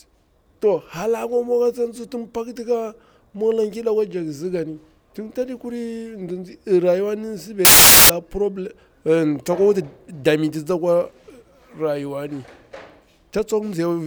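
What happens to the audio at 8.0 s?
At 8.0 s the speech is replaced by loud, harsh broadband noise. It comes from samples built from the wrong bytes, lasting from about 7.65 s to 8.10 s. In that span the reader assembles each sample incorrectly, offset by a byte or with the byte order swapped. The rapidly changing low bits end up as the large part of every value. The result is harsh broadband noise in place of the speech.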